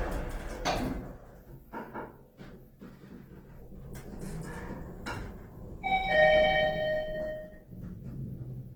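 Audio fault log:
Throughout: Opus compression, plainly audible, likely from a music-mode stream; the grain fits roughly 16 kbps. Band energy is preserved, but thin bits fill bands with folded or noisy content, so tones turn rough and grainy. A spectrogram shows speckled texture with few holes, extending to 20.1 kHz.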